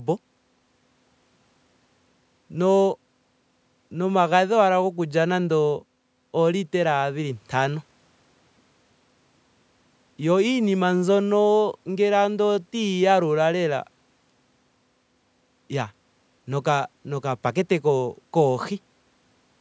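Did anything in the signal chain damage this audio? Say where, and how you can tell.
No, nothing in the signal chain damaged this speech; the only trace is ordinary call microphone processing, which trims the lowest bass and leaves nothing above 8 kHz.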